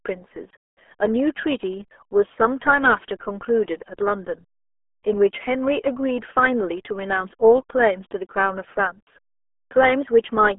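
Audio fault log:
throughout RealAudio 14.4 codec: The speech is confined to a narrow telephone-like band of about 300 Hz to 3.4 kHz, with nothing at all above 3.8 kHz, so sibilants and consonant detail vanish and the voice turns muffled. The heavy coding damage gives a gargly, watery texture, as the coder rebuilds each short frame from a crude vocal-tract model, a degree of crushing that fits a dial-up-era 8 kbit/s speech codec.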